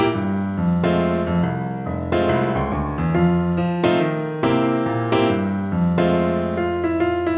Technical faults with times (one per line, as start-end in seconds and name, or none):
none